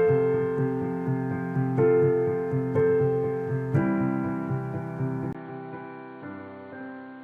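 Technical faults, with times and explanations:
5.33 to 7.23 s, input switched to a poorer device: A gap of about 20 ms opens, then the sound returns duller and boxier. Nothing above 4.4 kHz survives, so the top end is gone. The level drops by about 5 dB. A faint new background noise sits well beneath the signal. The cause is likely a mid-recording switch to a different microphone or a headset's call profile, with its own narrower band, tone and noise.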